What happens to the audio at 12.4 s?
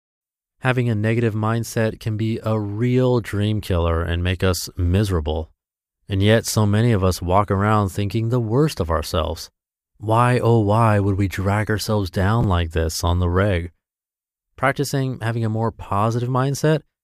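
Chunks out of order, from 12.41 to 12.44 s, just after "would we drag ourselves" and before "like this on the". A 10 ms chunk plays about 20 ms late, behind the audio that should follow it. Nothing is lost. The three hard joins give a brief jumbled stutter.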